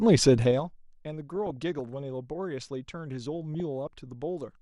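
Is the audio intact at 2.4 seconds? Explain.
No. At 2.4 seconds, as throughout the clip, the speech sounds dull, with a gurgling, granular grit. This is likely MP2 compression at a rate that fits about 80 kbps. Too few bits switch off upper sub-bands and coarsely quantise the rest.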